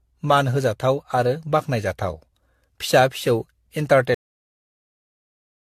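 Repeated lossy re-encoding has likely worn the speech down from start to finish. The sound points to an AAC-LC chain at about 64 kbit/s, run through around seven times, with each pass quantising again on a shifted frame grid. This is generation loss. Its errors pile up into a swirly, hollow smear, consonant attacks lose their edge, and nothing remains above 14 kHz, a worse result than that bitrate alone would give.

At 4.15 s the final stretch of audio was never written out, so playback has nothing left to deliver. This cut-off end chops the speech off mid-sound. It drops straight into digital silence with no natural decay, and that dead silence continues through the rest of the file. The stop is abrupt and unnatural, because nothing fades or rings out. The sound simply ceases at one instant.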